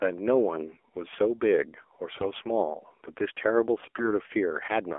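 Throughout, the speech has passed through an AMR narrowband mobile codec running at a low bitrate, consistent with the 7.4 kbps mode. Everything outside roughly 300 Hz to 3.4 kHz is gone, and the sparse pulse-driven vocal model leaves the voice plainly buzzy and synthetic.

From 2.10 to 2.31 s, AMR bit errors corrupt the weakly protected bits of the frames, on the order of 7 percent of them. Misplaced excitation pulses and wrong fine gain and spectral values make the voice hoarse, scratchy and gargly while its pitch and level hold.

The same AMR bit errors return from 3.82 to 4.13 s, at a somewhat lower rate of around 5 percent. Across nine corrupted 20 ms frames, the voice again turns rough and gargly at much the same pitch and loudness.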